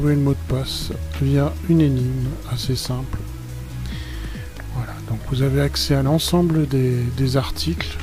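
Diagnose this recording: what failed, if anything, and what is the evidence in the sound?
Nothing in the signal chain appears to have failed: the audio holds steady with no dropouts, discontinuities, level jumps or added noise at any point.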